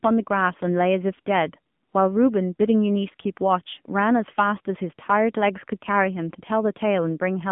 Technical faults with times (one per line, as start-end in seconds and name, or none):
0.00-7.52 AMR narrowband mobile codec